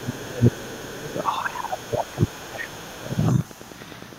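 From 0.0 to 1.06 s, the talker's speech is suppressed in double talk. It sinks by roughly 25 dB over about a second. The likely cause is an echo canceller turning down both voices at once. Under it, the other side's voice is leaking through, faint, at 0.03 to 0.25 s and 0.5 to 0.79 s. It returns louder, only about 25 dB below the speech, from 0.98 to 1.45 s. It probably escaped echo cancellation from a loudspeaker. From 1.44 to 3.26 s, the suppression repeats for about one and a half seconds. Faint leakage of the other voice recurs at 1.76 to 2.31 s, 2.71 to 3.17 s and 3.33 to 3.7 s.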